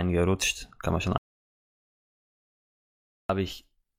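A speech clip with an audio dropout to silence from about 1.18 s to 3.29 s: the sound cuts off mid-flow and the gap is silent, no room tone at all, so roughly two seconds of speech is simply gone. Likely the input dropped, through a disconnected device, a failed link or a stray mute, while the recorder kept writing silence.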